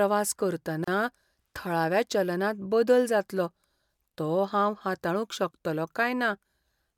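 At 0.84 s the speech drops out for about 34 ms, until 0.88 s: a gap at a join of encoded pieces. Two separately encoded chunks were butted together untrimmed, so the encoder's start-up delay and end padding sit there as a short, smeared hole before the speech resumes.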